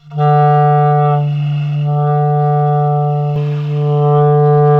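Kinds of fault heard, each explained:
Channel delay (comb filtering): From the start to about 3.36 s the sound is hollow and phasey, thinned in a way that stays fixed rather than sweeping. One channel arrives roughly 1.5 ms behind the other, and when the two are summed to mono the shared content cancels at evenly spaced frequencies. The first notch sits somewhere around 300 Hz, with further notches repeating up the spectrum, which gives the comb-like hollowness.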